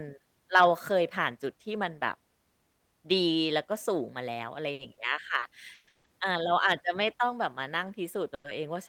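Packets arriving late on this speech recording let the jitter buffer run dry three times in quick succession, producing short stalls from a late packet at 4.73 to 4.81 s, 4.93 to 4.99 s and 5.39 to 5.44 s. Each time the receiver stretched the last sound for 60, 40 and 30 ms respectively, heard as a held, faintly buzzy sound, then resumed at the same point with nothing lost, so the speech simply runs that much later afterwards. Longer hold-ups, likely from packets delayed in transit, cause call audio freezes at 5.74 to 5.89 s and straight on from 5.89 to 6.06 s, and again at 8.34 to 8.46 s. Here the final sound is carried on as a fading buzz for 130, 150 and 100 ms, the middle one briefly dropping to about 10 ms of silence, before the speech picks up exactly where it stopped, leaving inserted gaps rather than missing material.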